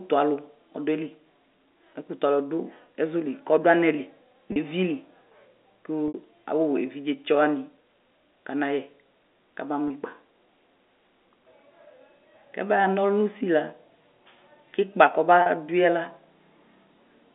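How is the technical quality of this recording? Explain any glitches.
The speech comes through a narrow telephone band, roughly 250 Hz to 3.6 kHz, consistent with G.711 A-law coding, and it has four short glitches caused by packet loss with pitch repetition.

At 4.52 s (40 ms), 6.08 s (60 ms), 9.88 s (20 ms) and 15.42 s (40 ms), the voice briefly freezes into a held, slightly buzzy tone before carrying on. Each gap fits the loss of one to three 20 ms packets. The receiver filled the missing audio by looping the last pitch cycle it received, and the longest gap, at 6.08 s, fades toward silence before the speech returns with a short cross-fade.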